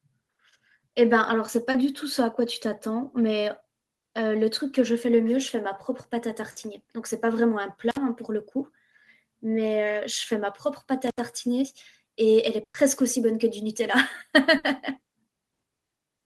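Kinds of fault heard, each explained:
Short concealed packet loss: Around 1.71 s, about 30 ms of the speech never arrived and was patched by continuing the preceding sound. It shows as a brief smear rather than a gap, which separates it from the longer, fading losses later on.
Burst of packet loss: At 6.51, 12.63 and 14.57 s, runs of 50, 110 and 60 ms were lost. The receiver stretched the last sound into a held buzz or hiss that fades, going silent for about 90 ms at 12.63 s, then the speech jumps ahead.
Intermittent contact: At 7.91 and 11.07 s, the signal drops out for about 60 ms and 73 ms. Unlike the packet losses, nothing is synthesized over the hole. Crackle marks the edges, and faint hiss remains while the connection is open.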